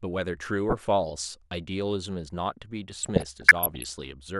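DAB burbling appears from 0.69 to 0.82 s, then again from 3.03 to 4.00 s. Bit errors slip past error correction into the MP2 data. The speech gains a few watery blips in the first stretch, and bubbling chirps and squelches, denser, in the longer second stretch.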